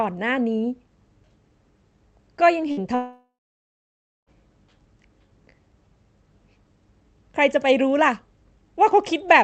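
In this speech recording, a burst of packet loss struck at 2.71 to 2.80 s: a short run of packets never reached the receiver, which stretched the last sound for about 57 ms while turning it down, so a brief fading buzz or hiss covers the gap and about 60 ms of speech is skipped. At 2.95 to 4.30 s there is what is likely a long network dropout. The concealed sound fades into roughly 0.95 s of silence before the speech resumes, with about 1.3 s of it lost.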